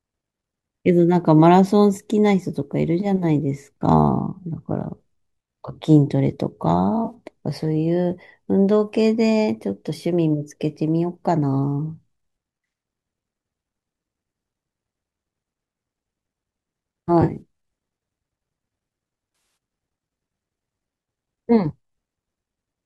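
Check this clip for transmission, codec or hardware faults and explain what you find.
Three short dropouts here, all AAC frame loss with concealment. At 7.05 s about 50 ms goes missing. At 17.22 s about 100 ms is lost in bursts spread over 180 ms, and at 19.35 s about 150 ms over 220 ms. The decoder patches each gap from the last good spectrum, so you get brief smeared, phasey, noisy blurs rather than clean silence. The worst run is roughly 70 ms. The light coding graininess underneath is likely just the low-delay AAC doing its normal job.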